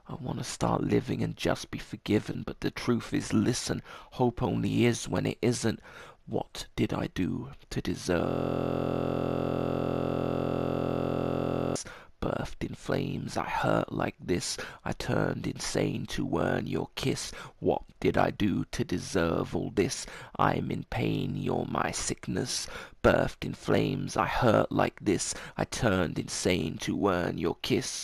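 At about 2.33 s, roughly 22.5 ms of lost LE Audio frames (fitting three frames) turns the sound into a brief noisy smear, as the LC3 decoder reuses the last spectrum with random signs rather than repeating it cleanly. From 8.3 to 11.76 s a system hang loop replays one 23.22 ms slice exactly, likely from a 1024-sample buffer, producing a steady 43.1 Hz buzz instead of a smear.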